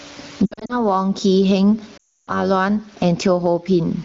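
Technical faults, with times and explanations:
Throughout: gain pumping. The level surges and sinks with the speech, swinging by something like 20 dB. Loud and quiet passages sit closer together than they should, giving a squashed, breathing quality. This is likely a microphone gain set far too high, with a fast limiter or compressor clamping down on every peak and releasing in the gaps.
0.46 to 0.79 s: lost AMR speech frames. Over about 240 ms the speech breaks up into short dips and warbles, with no single gap longer than 60 ms. Failed frames are scattered through this stretch. For each one the decoder repeats the last good pitch and vocal tract settings at reduced gain, so the sound smears briefly and then recovers, roughly, when the next good frame arrives.
1.97 to 2.33 s: lost AMR speech frames. Here 300 ms of speech frames are missing within this stretch. The decoder holds the last pitch and spectral shape while the gain falls, so the sound drops to near silence within a couple of frames, as wideband concealment does. 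The speech then returns weak and rough for a moment before the decoder settles. The room noise sits about 39 dB below the speech.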